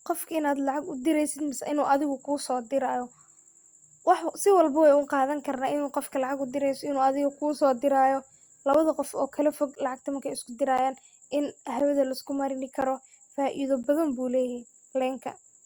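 Speech, with periodic USB or driver dropouts. Just after "adega kusodirayo", from 8.73 to 13.84 s, about seven short ticks repeat every 1.024 s. Each is a gap of silence around 10 ms long, where a background task stalled the audio driver.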